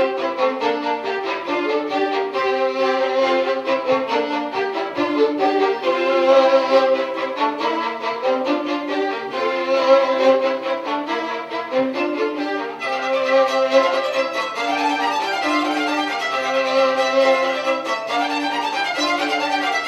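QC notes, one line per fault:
No faults found in clip.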